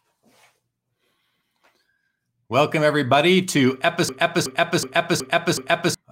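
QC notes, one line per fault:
4.09–5.94 s, system hang loop: the audio locks onto one 0.37 s slice and replays it five times at about 2.7 Hz, giving a machine-gun stutter rather than a buzz, because the slice is long. The identical repeats, with no gaps or smearing, set it apart from dropouts or codec glitches. The hardware kept cycling a ring buffer while the system froze. The loop length fits a 16384-sample buffer, and roughly two seconds of audio never arrives.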